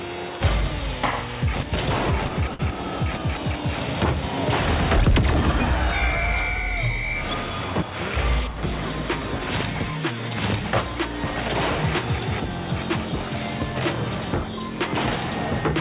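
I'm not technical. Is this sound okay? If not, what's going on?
No. There's a short stall from a late packet at about 2.54 to 2.62 s. One piece of the audio arrived late, so the receiver held the last sound for about 52 ms until it came, then carried on. Nothing is lost, but that moment sounds briefly stretched.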